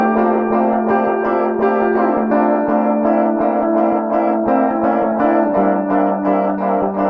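Nothing goes wrong technically anywhere in this bit of music, so there's no fault to point to at any moment.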